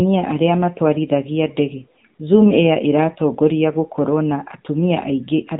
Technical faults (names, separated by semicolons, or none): AMR narrowband mobile codec